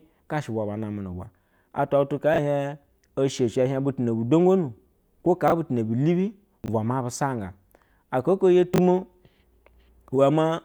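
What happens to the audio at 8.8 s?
Just after "oko yo", from 8.74 to 8.78 s, the speech briefly jumbles: chunks out of order. One 20 ms chunk plays one chunk late, after the chunk that should follow it, so nothing is lost but the order swaps and there are three hard joins.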